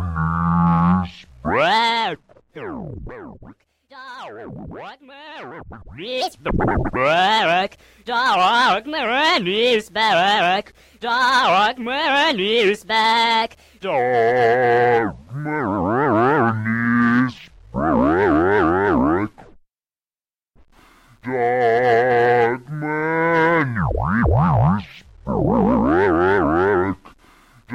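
Nothing stood out on listening to this audio.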